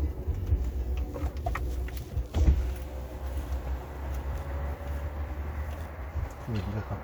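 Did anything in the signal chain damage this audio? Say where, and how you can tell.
No, nothing along the chain audibly damaged this recording of sounds, and no stage leaves a mark anywhere in it.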